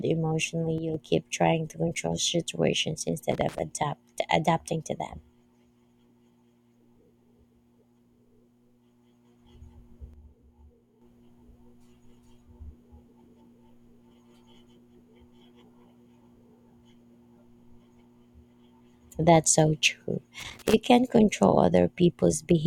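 Speech, with two kinds of fault. One channel drops out at 0.78 to 0.94 s and again at 10.14 to 11.02 s: the level falls abruptly by about 6 dB and recovers just as suddenly. The likely cause is the loss of one stereo channel, so that after the two channels are summed to mono, the material they shared arrives at half its amplitude, and anything carried only by the missing side vanishes until it returns. Loose connector crackle appears at 3.32 to 3.59 s and at 20.40 to 20.74 s as short, irregular bursts of scratchy crackle over the speech. A worn or dirty contact making and breaking in quick succession chops the signal, which gives the rough, uneven texture of these two bursts.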